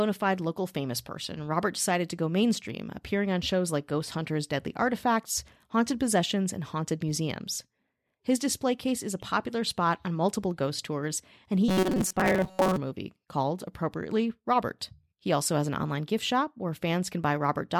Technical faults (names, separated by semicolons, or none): robotic sound from repeated short buffers